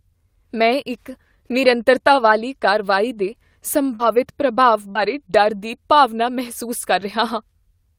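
A speech recording with two brief disturbances around 4 and 5 seconds and a third, smaller one near 6.8 seconds. At 3.95 to 4.01 s and again at 4.91 to 4.97 s there is a short smear where the sound seems to hang on and wobble rather than move forward. This is short concealed packet loss. About 40 ms of audio arrived too late to decode, and the receiver covered each hole by extending what came before, roughly 39 ms and 36 ms respectively, before blending back into real signal. Overlapping those spots, from 3.99 to 4.09 s and 4.95 to 5.01 s, and on its own at 6.81 to 6.83 s, the sound turns rougher and grainier without any gap. These are lost packets rebuilt from error correction. The following packets carried low-bitrate backup copies of the missing frames, and the decoder played those instead. That rebuilt about 60 ms, 40 ms and 20 ms, which fits three, two and one lost 20 ms packets.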